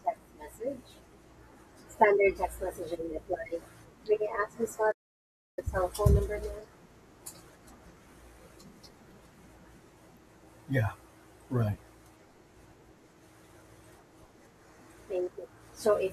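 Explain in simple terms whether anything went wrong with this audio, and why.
At 4.91 seconds the speech suddenly cuts out and stays silent until 5.59 seconds, a gap of about two-thirds of a second, before carrying on. This is a playback stall, likely caused by the player briefly running out of audio data or being held up.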